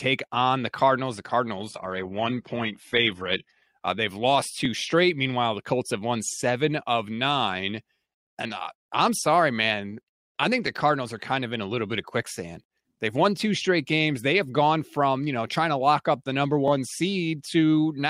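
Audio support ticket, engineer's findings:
Adaptive stream at a lower bitrate, 1.57 to 3.57 s: sudden dulling with no gap and nothing above 11.8 kHz. Sounds like the player dropped from a 96 kbit/s AAC rendition to a roughly 16 kbit/s HE-AAC one when throughput dipped, then recovered.

Overlapping chunks: stutter-clicks at 4.65 s after "they've lost", 10.67 s after "sorry man I think", 16.68 s after "lock up the number". Each join replays about 12 ms, every 6 s. Points to the chunker starting each 6 s block slightly before the previous one ends.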